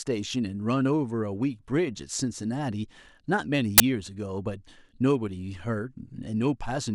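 A speech recording in which the player has read part of the file's tag block, here the compressed data of an embedded cover picture, as though it were audio samples. Because compressed image bytes look essentially random, they decode to very loud white noise, so from 3.78 to 3.80 s the speech is interrupted by a brief, very loud burst of static that starts and stops abruptly, with hard edges and no fade on either side.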